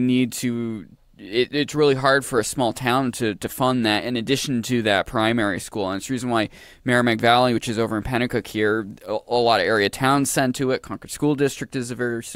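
At 7.19 to 7.21 s, and again at 9.94 to 9.96 s between "a lot of area" and "send to it", a single loud pop rises about 5 dB above the speech. Each is likely a brief voltage step or pulse, from a plug, switch, static or driver glitch, added to the signal and shaped by the circuitry after it. Unlike a dropout or an edit click, the speech carries on unbroken beneath each pop.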